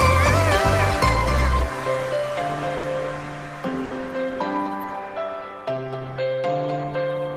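At 2.77 s and again at 3.85 s, a burst of packet loss drops a stretch of the stream, and the receiver conceals each hole by stretching the last sound it had and fading it over about 60 ms, until 2.86 s and 3.94 s respectively. Depending on what came just before, that fill is a held buzz or a dwindling hiss. Playback then picks up about 60 ms further along, so that much audio is simply absent at each point.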